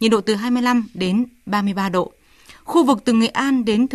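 No technical faults can be heard in the speech recording, which holds steady from beginning to end.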